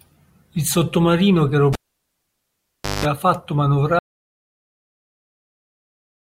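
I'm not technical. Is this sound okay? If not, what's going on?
No. At 1.73 s a cable was pulled out and plugged in again: a pop, about 1.3 seconds of near silence, a short 50 Hz mains buzz, then another pop at 3.05 s. From 3.99 s to the end there is an audio dropout to silence, likely from the input being lost, so the speech stops dead and leaves completely empty silence.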